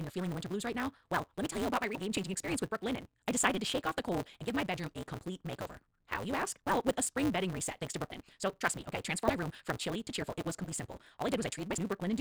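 Right through the clip there's a 188 Hz buzz from a block size mismatch (truncated). Block ends get dropped, consistent with a 256-sample read, so the speech runs 1.88 times fast at roughly normal pitch. Then come brief jump-ahead glitches at 1.94 s (between "tell you about my" and "game changing experience with"), 8.09, 9.27, 10.64 and 11.77 s, each lasting about 16 to 31 ms. These are likely a broken MP3 bit reservoir, where frames after a cut borrow the wrong data.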